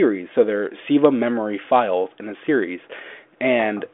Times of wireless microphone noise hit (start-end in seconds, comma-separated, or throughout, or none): none